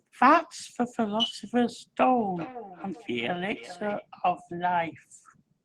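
Feedback echo between two devices runs from 2.36 to 4.06 s: the speech comes back at an interval of roughly 0.4 s, each repeat thinner and more ringing than the last, peaking at about 17 dB below the direct speech. Two devices in the same room were joined to the call, so one played the other's microphone feed aloud and that microphone caught it again. Each echo canceller removes only its own device's playback, so the speech came round again.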